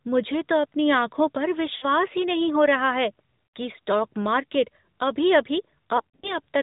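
The speech runs through the AMR narrowband mobile codec. Nothing above 4 kHz survives. The buzzy, synthetic tone fits a mode around 10.2 kbps.

Lost AMR speech frames follow. Between "तो अपनी आँखों पर" and "ही नहीं हो रहा", at 1.76 to 1.86 s, about 60 ms drags and fades. At 3.56 s, after "नहीं हो रहा है", 80 ms smears out before "कि स्टॉक मार्केट". From 5.98 to 6.37 s, scattered losses totalling 140 ms warble and dip, the longest lasting 60 ms.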